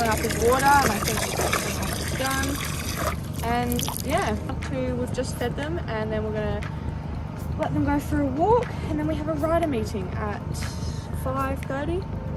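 No technical faults are audible anywhere in the audio.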